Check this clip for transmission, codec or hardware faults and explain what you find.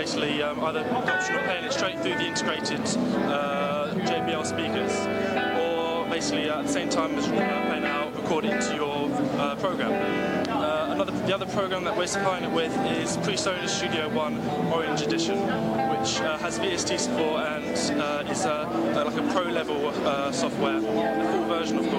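Video or display buzz runs through the whole clip. A screen or its cable is coupling interference into the audio, giving a buzz at the 75 Hz field rate with hash above it, roughly 25 dB below the sound. Unlike mains hum, it sits at 75 Hz rather than at 50 or 60 Hz.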